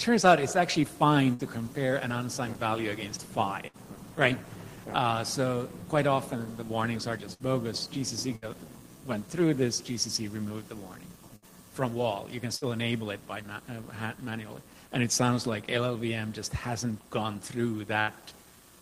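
You get a burst of packet loss at 1.33, 3.67, 7.34, 8.36, 11.36, 12.56 and 18.01 s. Each time roughly 60 ms never arrived, so the receiver stretched the last sound into a fading buzz or hiss, then jumped ahead past the missing chunk.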